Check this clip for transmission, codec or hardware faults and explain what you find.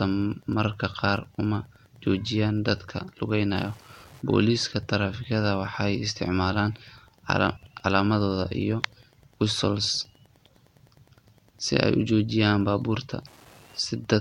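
Two faults are present: a faint ticking that runs through the whole clip, and one brief garbled flutter in the speech just after the halfway point.

Wi-Fi interference runs from start to finish as a steady, quiet ticking about ten times a second, sitting around 35 dB below the speech. The ticks repeat every 102.4 ms, which matches the beacon interval of a Wi-Fi radio. A transmitter close to the audio circuitry is sending those periodic beacon bursts, and the circuit rectifies the radio energy into audible clicks at the same rate.

Frames out of order occurs from 7.56 to 7.71 s, where the speech briefly turns into a garbled flutter. The stretch plays with its two halves swapped. Each half lasts about 69.7 ms, which fits runs of three codec frames that reached the decoder in the wrong order and were played back that way. Because the frames were only rearranged and none were dropped, the clip loses no time.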